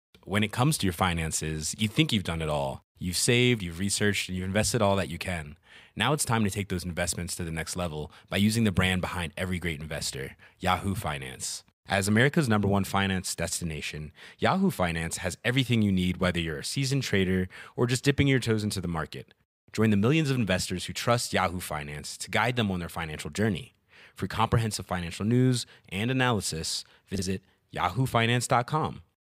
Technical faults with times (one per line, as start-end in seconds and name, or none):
16.23 dropped samples
17.08 dropped samples
21.95 dropped samples
23.02 dropped samples
27.15-27.22 frames out of order